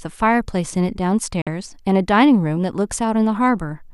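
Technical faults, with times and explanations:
1.42–1.47 s, digital broadcast dropout: the speech fades out over about 3 ms and leaves a short silent hole. Frames failed to decode, so the receiver muted, and about 48 ms of programme, which fits two lost frames, is missing when the sound resumes.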